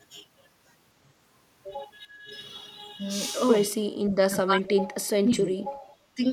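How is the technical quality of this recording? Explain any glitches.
The speech is interrupted by four short gaps, at 2.01–2.31 s, 4.26–4.96 s, 5.16–5.72 s and 6.15–6.25 s. In each, the level sinks sharply, by around 15 dB in the briefest and by roughly 35 dB at worst, near 4.3–5.0 s. The likely cause is speech suppressed in double talk. An echo canceller could not separate this talker from loudspeaker echo while both ends spoke, so it turned the signal down. On a waveform the envelope pinches inward at those moments, and a spectrogram shows faded vertical bands.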